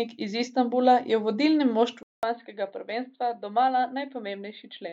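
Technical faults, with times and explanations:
2.03 s to end, input switched to a poorer device: after a 200 ms silence the speech turns duller and narrower, with nothing above 4.6 kHz, a level drop of about 5 dB and a new, faint noise floor roughly 50 dB below the signal. The gap and sudden change in tone, level and background point to the recording likely jumping to another microphone or a headset's call profile, whose narrower band and own noise replace the original path.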